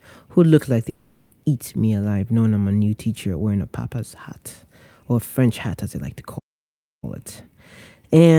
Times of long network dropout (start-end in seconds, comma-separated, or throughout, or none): 0.89-1.33